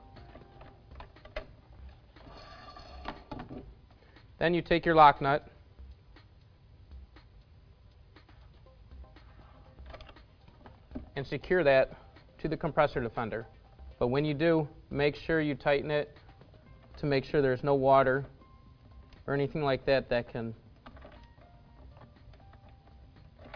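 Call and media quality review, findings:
No faults found in the signal path; level, continuity and timing hold steady throughout the clip with nothing to flag.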